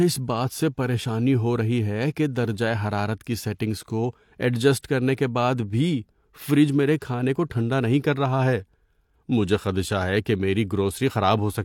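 At 4.82 s there is pre-echo: a brief hiss, about 17 ms long, lands just ahead of a sharp speech onset. The codec spread quantisation noise across the whole transform block, so noise meant for the attack leaks into the quiet gap before it, softening the onset.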